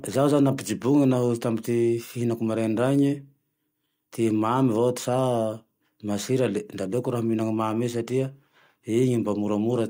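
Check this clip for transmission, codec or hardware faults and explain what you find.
Nothing here stands out as a transmission, codec or hardware problem; the speech comes through steady and intact the whole way.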